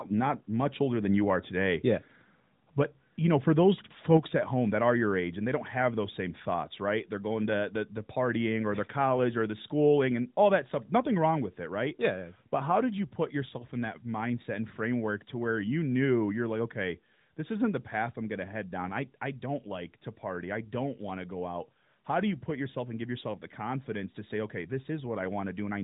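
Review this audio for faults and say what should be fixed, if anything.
At 4.17 s the speech and the background beneath it drop together by about 5 dB in a single abrupt step, with no fade. This is a microphone volume stepped down, likely the call software's automatic level control lowering the device's input volume in one move after judging the signal too hot. The sound is band-limited below 3.8 kHz by the AMR narrowband mobile codec in its 12.2 kbps mode, and the step spans that whole band evenly. To prevent it, turn off automatic microphone adjustment in the call software and set the input gain manually with adequate headroom.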